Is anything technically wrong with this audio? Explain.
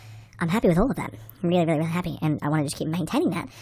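Yes. Throughout the speech, a wrong sample rate plays the samples about 1.45 times too fast, which fits 22 kHz audio played at 32 kHz, lifting pitch about 6.5 semitones into hurried, squeaky delivery.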